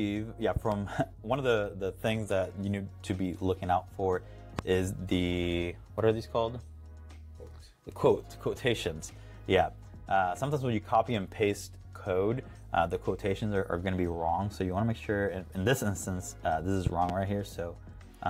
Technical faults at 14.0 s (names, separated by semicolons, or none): none